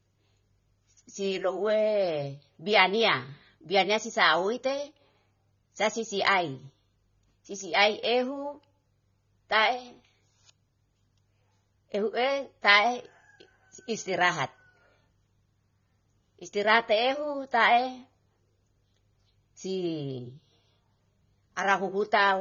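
Throughout the speech, the encoder has likely squeezed it through heavy AAC compression, with damage consistent with AAC-LC at a low bitrate, around 24 kbps. Nothing survives above 6.9 kHz, so the sound is dull and smeared, and sibilants take on a fizzy, warbling texture.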